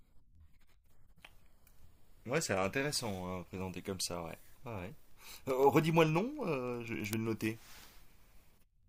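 From 0.16 s to 8.83 s, word clock ticks run under the speech. The receiving device is not locked to the sender's clock and drifts by around 300 ppm. Roughly every 70 ms, one sample slips. About 150 sharp ticks result, uneven in strength.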